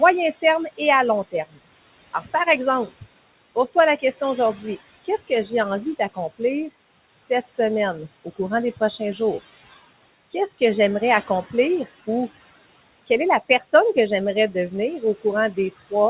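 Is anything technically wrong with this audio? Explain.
Yes. Two related faults are audible.

Noise suppressor artifacts run through the whole clip. The suppressor pulls down bands it judges to be steady noise, by about 18 dB. The room noise, about 17 dB below the speech, dips in pauses and returns under speech.

Speech cut by the noise suppressor occurs at 0.42–1.58 s, 2.13–6.41 s, 7.18–7.59 s, 8.25–9.20 s, 10.32–10.62 s (just before "j'aimerais accomplir ou"), 13.07–13.97 s and 14.52–15.92 s. The suppressor mistakes quiet speech for noise and drops it by about 16 to 20 dB. Roughly 100 to 500 ms in each span is hit, so parts of the speech sound swallowed or faint. Nothing is heard above 4 kHz, which fits a G.711 mu-law call path.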